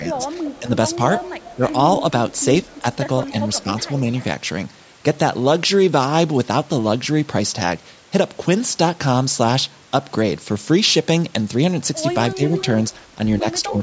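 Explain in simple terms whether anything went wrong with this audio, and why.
The echo canceller likely struggled when both sides spoke at once, causing speech suppressed in double talk: the voice briefly dips or drops out at 0.0 to 0.99, 1.57 to 2.13, 2.68 to 2.85, 12.35 to 12.41 and 13.42 to 13.81 seconds.

The far end's loudspeaker sound was likely not fully cancelled, so an echo leak sends back a copy of the voice about 0.2 seconds late, heard at 0.42 to 1.73, 2.31 to 4.24 and 12.45 to 12.95 seconds.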